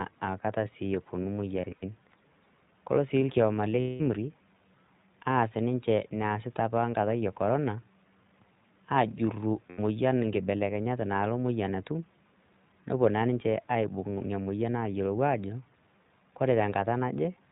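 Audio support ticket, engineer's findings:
iLBC codec, whole clip. Narrowband VoIP coding, each frame's excitation coded independently; rate and framing fit the 15.2 kbps, 20 ms mode. Symptom: nothing above 4 kHz, speech muffled and a little rough, slightly synthetic throughout. Damage clearly audible, not subtle.

Lost iLBC frames, three events. Packets dropped; decoder conceals by repeating the last pitch cycle mixed with noise, fading as the gap lengthens. Symptom: held, buzzy or breathy vowel in place of speech, clean recovery almost immediately since frames stand alone.
1.62–1.84 s, after "aakata sii eponu": about 100 ms lost, scattered over 200 ms, longest run around 70 ms.
3.80–4.02 s, after "kolo sii ilkioma le": 200 ms lost.
9.70–9.80 s, before "inkibelekenyat nalo moyian atum": about 80 ms lost.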